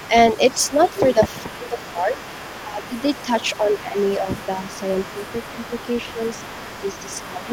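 From the start and through to the end, the other side's voice leaks through faintly, around 20 dB below the main speech. The likely cause is an echo canceller leaving residual loudspeaker pickup in the microphone signal, so a second, quieter voice runs underneath.

The speech is also suppressed in double talk, with dips at 0.09–0.13, 0.69–2.15, 2.61–4.3, 4.63–4.71, 5.17–5.22, 5.55–5.61 and from 6.01 to the end. Short dips are about 5 to 10 dB; longer stretches lose up to about 15 dB. This is likely the canceller attenuating the near talker while both sides speak.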